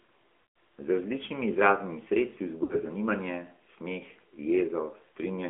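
From the start the whole clip runs through the AMR narrowband mobile codec, and the damage is plainly audible. The band sits at roughly 250 Hz to 3.4 kHz, so everything sounds boxed-in and phone-like. The speech has that buzzy, slightly synthetic edge you get when a vocal-tract model driven by sparse pulses rebuilds the voice. The coarseness fits the 10.2 kbps mode rather than one of the lowest ones.

Then at 0.42 to 0.56 s there's a run of lost AMR speech frames. About 140 ms goes missing, which fits seven 20 ms frames failing their checks. The decoder keeps repeating the last good pitch and spectral settings while the gain drops, so the sound smears out and fades toward silence across that stretch. When it picks up again it comes back thin and a bit rough for a moment.

A second, shorter hit of lost AMR speech frames lands at 2.64 to 2.78 s. Only about 60 ms is lost here, which points to three frames. 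It comes across as a brief dip with a little warble rather than a full fade, since the concealment doesn't have time to drain away completely.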